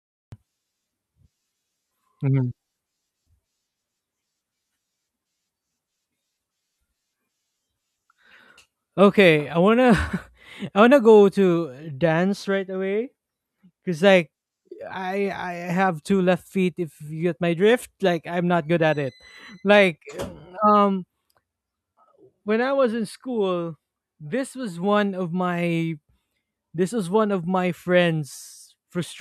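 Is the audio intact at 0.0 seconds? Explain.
No. From 0.0 to 0.32 s there is digital silence, then the speech starts abruptly mid-sound with no natural onset: a cut-off start, where capture began late.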